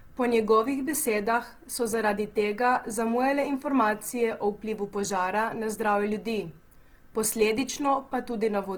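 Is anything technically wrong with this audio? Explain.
Yes. Throughout, the speech sounds grainy, rough and noisy. Likely Opus compression: its music mode fills bit-starved bands with noise, fitting a rate near 16 kbps.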